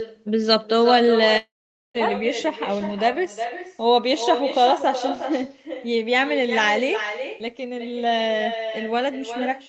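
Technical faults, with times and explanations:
Throughout, echo with no canceller: every phrase returns around 0.4 s later as a thinner copy about 8 dB quieter, picked up from a far-end loudspeaker and sent back. Unlike room reverberation, it is a distinct delayed repeat, not a smooth tail.
1.37–1.96 s, long network dropout: about 0.58 s of sound is missing. The last sound is briefly stretched into a fading buzz, then about 0.47 s of silence follows. Sound resumes further on with the gap lost, likely from packets that never arrived.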